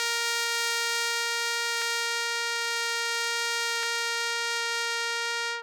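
At 1.82 s and again at 3.83 s the music gives a quick tick or stutter. That's overlapping chunks: the audio was handled in 2-second blocks, each starting about 13 ms before the last ended, so that sliver plays twice at every join.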